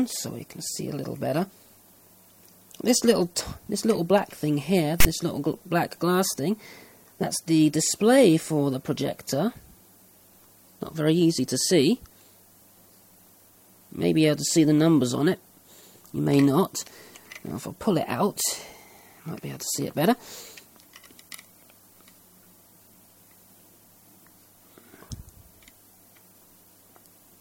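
File tags played as audio occur from 5.00 to 5.05 s: a block of text metadata was decoded as if it were samples. The text bytes produce a loud, one-sided rasp with abrupt edges, followed by a brief dead silence where zero padding was read.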